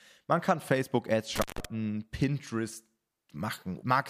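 At 1.36 s the speech suffers an intermittent contact. A loose cable or plug briefly loses its connection. The signal drops out, and the line stays open for about 157 ms. Crackle marks the edges as the contact breaks and then catches again. In the gap, the speech vanishes and only faint hiss remains. The whole disturbance, crackle included, runs from 1.36 s to 1.65 s. Then the sound returns abruptly.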